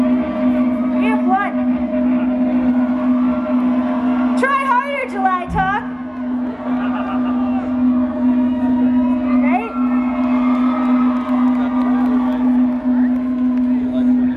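Nothing technically wrong can be heard in this audio.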